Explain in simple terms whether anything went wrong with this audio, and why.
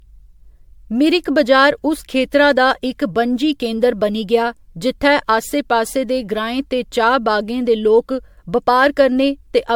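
Yes, something went wrong. From start to finish the speech has a swirly, hollow, smeared quality, and consonant onsets sound blurred. That is generation loss, likely from the audio being saved as MP3 about seven times in a row, each pass adding fresh damage.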